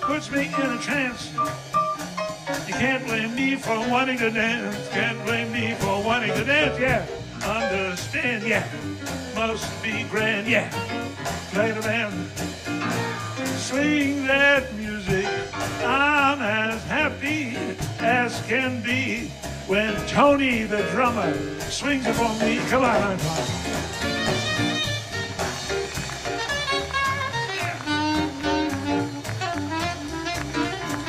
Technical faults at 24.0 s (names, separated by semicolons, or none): none